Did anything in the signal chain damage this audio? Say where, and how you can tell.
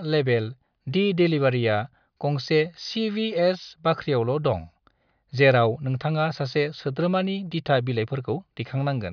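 No, nothing along the way from capture to playback left a mark on this speech that I can hear, so there's no stage to point a finger at.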